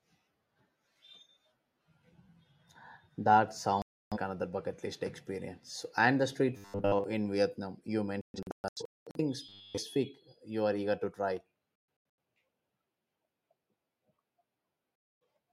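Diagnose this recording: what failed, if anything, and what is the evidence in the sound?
Digital broadcast dropout at the reception and decoding stage: the speech mutes at 3.82–4.17 s, just before "another bucket list"; at 8.21–9.20 s as scattered holes, the longest about 0.21 s; at 11.76–12.18 s after "are eager to try"; and at 14.96–15.21 s. Failed frames were silenced, so the waveform shows flat gaps and the spectrogram shows blank vertical bands.

Robotic sound from repeated short buffers, likely a starved driver or playback buffer: at 6.57–7.04 s after "and the street", and at 9.47–9.78 s, speech becomes a metallic 100 Hz buzz. Looping a 10 ms chunk explains that pitch. The waveform shows repeating cycles, and the spectrogram shows a rigid comb of 100 Hz harmonics.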